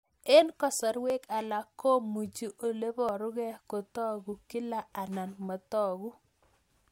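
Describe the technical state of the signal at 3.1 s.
At 3.09 s, just after "alak komuchi ole", the speech skips forward: a tiny sliver of sound, roughly 15 ms, drops out, and the audio on either side is butted together with no gap of silence, so the flow jumps abruptly. This is audio missing between chunks. The likely cause is a recorder or processor working in 2 s blocks that loses a few milliseconds while closing one block and opening the next, then splices the edges directly.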